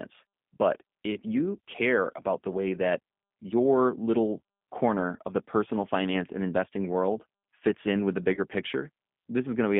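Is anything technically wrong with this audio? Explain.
Yes. Throughout, the speech passes through the G.729 codec, heard as a telephone band of roughly 150 Hz to 3.6 kHz at 8 kbit/s. Each 10 ms frame is rebuilt from a vocal tract filter, a pitch predictor and a few pulses, so the speech sounds plainly rough and synthetic.

From 8.34 to 8.47 s, just after "fits in with the", there is VoIP packet loss concealed by the speech codec. About 30 ms of audio went missing, which fits three lost frames. The decoder extended its last pitch and filter at falling gain, so the sound stretches into a buzzy tone or coloured noise that fades, then stays weak briefly as the decoder recovers.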